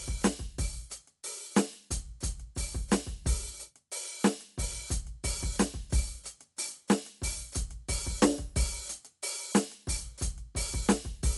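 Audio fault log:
Throughout: Dolby Digital compression, music sounds dull with nothing above 11.5 kHz and rough fluttering noise around tones, likely from low-bitrate coding near 64 kbps.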